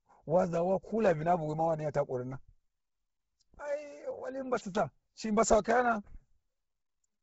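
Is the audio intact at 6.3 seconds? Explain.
No. At 6.3 s the speech carries the same damage heard across the whole clip, likely Bluetooth LC3 compression. Nothing reaches above 7.8 kHz, and the heavily starved upper spectrum is refilled with noise, giving a grainy, breathy edge that points to a low bitrate near 16 kbps.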